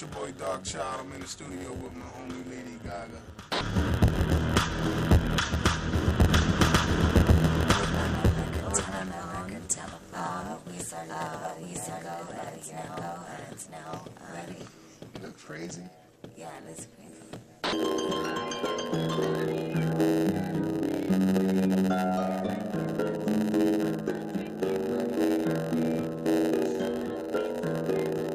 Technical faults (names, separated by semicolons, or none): block size mismatch (padded); doubled audio track